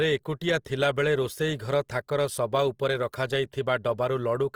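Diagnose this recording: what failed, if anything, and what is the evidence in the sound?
The speech throughout sounds grainy and rough, with a noisy, sandpapery texture, yet little swirling and few watery holes, and the top extends to about 20.2 kHz with nothing above. The codec stage is the likely cause: Opus compression in its music (CELT) mode, at a rate that fits about 24 kbps. Short of bits, it preserves each band's energy but fills the detail with folded or noise content, so harmonics turn grainy instead of dropping out.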